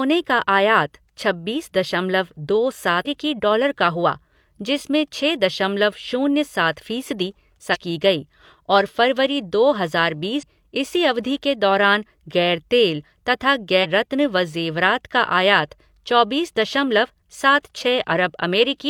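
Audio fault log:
3.01–3.07 s, 7.70–7.76 s, 10.39–10.44 s, 13.80–13.86 s: damaged data in a compressed stream. Four short blips of about 60 ms each, falling between "छब्बीस दशमलव दो" and "डॉलर का हुआ जिसमें", just before "की गई और फरवरी", and right after "दौरान गैर तेल तथा". Bad bytes in the compressed stream trip the decoder, which loses sync and skips ahead to the next good frame. That gives the brief glitch at each spot.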